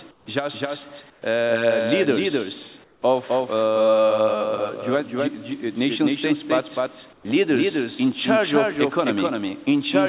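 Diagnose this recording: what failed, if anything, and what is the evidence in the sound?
Doubled audio track, throughout the clip: a full-band second copy of the sound trails the original by roughly a third of a second, about 5 dB quieter, with no decay or room colour. This is likely a call-processing or editing fault, where a slower capture path or misaligned edit mixes the audio in twice.

Comfort noise in place of the background, at 0.11–0.26 s, 1.1–1.22 s, 2.84–3.02 s and 7.13–7.25 s: the background, about 31 to 32 dB below the loud parts, drops by about 6 to 8 dB and turns smoother. The cause is likely discontinuous transmission, with the receiver synthesising filler noise during pauses. The band limit at 4 kHz belongs to the narrowband call codec.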